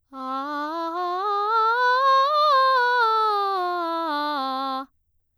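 A music clip with no audible technical fault: nothing in the playback calls for a time, a value or a cause.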